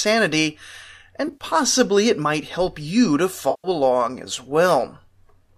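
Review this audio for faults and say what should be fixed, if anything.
AAC frame loss with concealment at 1.28–1.44 s (80 ms lost over 120 ms) and 3.50–3.68 s (140 ms): lost frames are rebuilt from the last good spectrum, giving smeared fill rather than the clean silence of a plain dropout. Forward error correction or a deeper jitter buffer on the link would prevent it.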